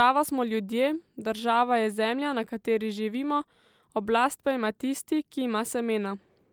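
No technical faults can be heard anywhere in the recording, and the signal holds steady and continuous throughout.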